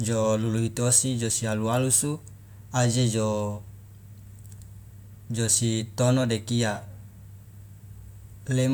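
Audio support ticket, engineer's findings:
No audible transmission or processing faults in the speech signal; nothing heard here calls for a change to any component in the chain.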